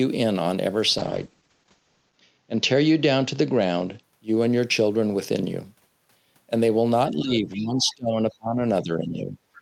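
Call bitrate drop, 0.98 to 4.09 s: the encoder was pushed to far fewer bits when the call's bandwidth estimate fell. The sound goes coarse and muffled, with the top end cut from 20 kHz to 8 kHz. That fits a fall from about 40 kbps to about 9 kbps, bottoming out for about 1.2 s.

Speech suppressed in double talk, 7.09 to 8.64 s and again 8.82 to 9.37 s: the speech dips sharply, by roughly 25 dB at its deepest in the first stretch and about 10 dB in the second. The likely cause is an echo canceller that could not separate its own talker from the loudspeaker echo while the two sides overlapped, and turned both down.

Other side's voice leaking through, 7.54 to 7.64 s: a brief, faint scrap of a second voice surfaces, roughly 20 dB below the main speech. It is likely loudspeaker echo that the canceller left in the microphone signal.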